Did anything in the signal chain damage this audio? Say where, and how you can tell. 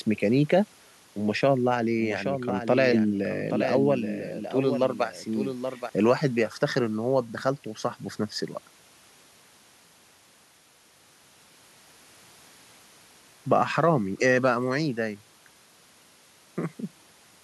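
Yes, there's a doubled audio track from 1.97 to 5.89 s: a second, dry copy of the speech trails by roughly 0.7 s at about 10 dB down, switching on and off abruptly. Likely a second, slower capture path or routing loop mixed back in.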